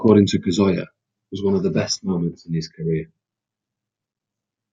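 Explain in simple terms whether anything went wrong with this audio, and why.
No faults can be heard.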